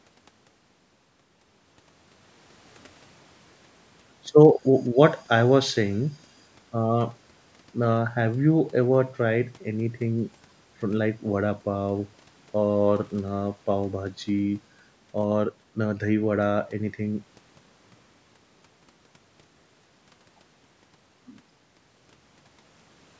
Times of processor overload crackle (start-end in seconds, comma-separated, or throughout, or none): none